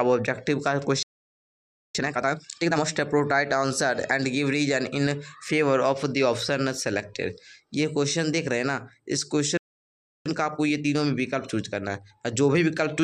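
At 1.03 s the player likely ran out of data or was blocked, a playback stall: the sound cuts off in mid-flow for 0.92 s before resuming at 1.95 s. Time-compressed catch-up follows, as the player trims its backlog by cutting and cross-fading short slices, so the audio rushes at double speed until 2.85 s, keeping its pitch. A second stall, likely from the same kind of blockage, silences the sound from 9.57 to 10.26 s, 0.68 s in all, and a milder 1.1× catch-up runs from there to the end.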